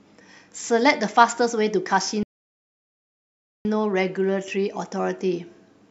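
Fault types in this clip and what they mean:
Rebuffering stall: from 2.23 s to 3.65 s the speech drops to silence for about 1.42 s, then picks up at exactly the point where it broke off. The playback ran dry of downloaded audio and had to wait for more data before continuing. No part of the speech is skipped or repeated; the gap simply inserts dead time, stretching the clip's running length by the duration of the pause.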